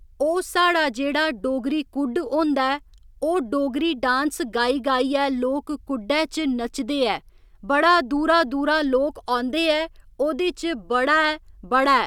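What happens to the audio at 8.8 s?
Nothing goes wrong at 8.8 s; the speech carries on intact through that moment, with no audible fault.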